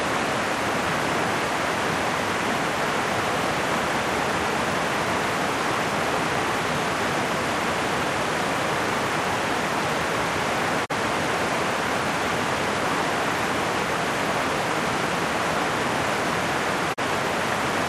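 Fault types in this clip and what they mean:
digital broadcast dropout: the receiver muted when a frame failed, so the sound fades out over 20 ms and drops for 32 ms, fitting one lost frame, at 10.84 s and 16.92 s. A spectrogram shows thin blank vertical stripes; the waveform, brief flat gaps.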